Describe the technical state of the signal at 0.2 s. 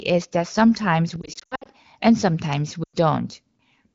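At 0.2 s the signal is intact, with the speech coming through the AMR wideband (HD Voice) codec with only the light coloration expected at a rate of about 15.85 kbit/s.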